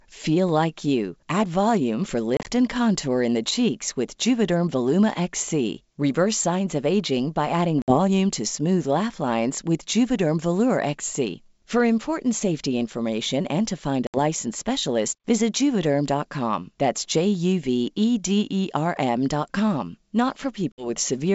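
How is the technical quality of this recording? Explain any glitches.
The recording has four brief dropouts, from packet loss on an ADPCM call. They fall at 2.37 to 2.50 s, 7.82 to 7.98 s, 14.07 to 14.19 s and 20.72 to 20.87 s. Each removes about 60 to 70 ms of speech. The first is broken up, spread over 100 ms with no gap longer than 30 ms. Lost packets become silence, so each hole has hard edges. The decoder's predictor and step size then drift from the sender's. Speech resumes slightly distorted and settles within tens of milliseconds. The wideband G.722 coding stays clear throughout.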